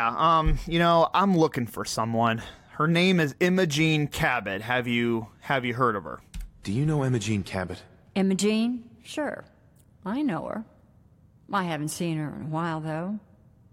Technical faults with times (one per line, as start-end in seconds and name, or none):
none